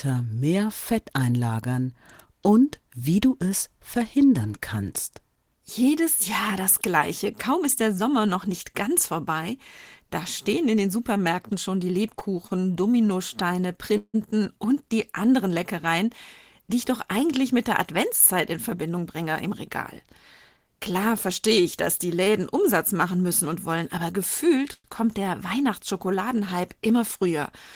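Speech recording with four jitter-buffer faults. Between 11.17 and 14.16 s, after "da stehen in den", repeated stalls (stutter) occur: five gaps totalling 244 ms, the longest 164 ms, each filled by continuing the last sound as packets fell behind. Nothing is lost, but delivery drags up to "und die anderen". From 17.91 to 20.65 s, following "doch eigentlich mit der", a jitter buffer speed-up trims short pitch-period pieces, about a tenth of a second in all, so the audio runs at 103 % speed with unchanged pitch. At 22.24–22.28 s a short stall from a late packet stretches the preceding sound by 26 ms before playback resumes in place. At 24.73–24.86 s, just before "kommt der", the sound holds and fades for 107 ms, ending in about 30 ms of silence, then continues where it stopped, most likely a call audio freeze from packets delayed in transit.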